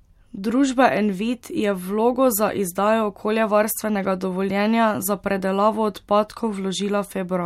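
Nothing goes wrong anywhere in this bit of speech, so there's no fault to point to at any moment.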